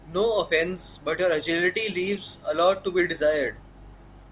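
Nothing here trips any of the usual alarms, since the speech runs along without a single moment that gives a listener pause.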